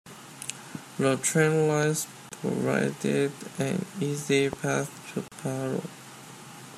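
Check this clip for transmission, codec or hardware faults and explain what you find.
Two kinds of fault appear in this speech: two loud pops and two gaps at a join of encoded pieces.

Loud pop at 1.83 s, just before "provided an easy", and at 4.53 s, just after "provided an easy". Each is a single sharp click about 10 dB above the speech, likely a voltage pulse from a switch or a static discharge entering the signal path. The speech continues beneath the pop, which sets it apart from a dropout.

Gap at a join of encoded pieces at 2.29 s (25 ms), just before "provided an easy", and at 5.28 s (36 ms). Separately encoded segments were joined with their encoder start delay and last-frame padding left in. The speech goes briefly silent, with smeared edges, then resumes where it stopped. This is missing sound, not a burst added on top.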